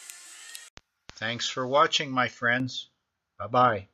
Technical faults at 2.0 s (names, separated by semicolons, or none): pre-emphasis left on